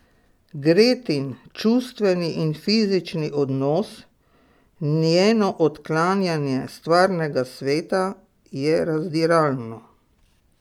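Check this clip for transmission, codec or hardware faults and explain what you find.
Nothing wrong can be heard anywhere in this speech.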